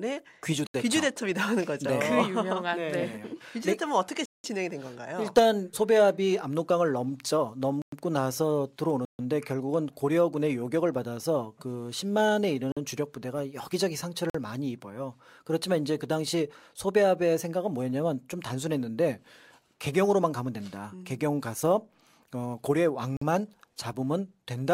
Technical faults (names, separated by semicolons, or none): block of digital silence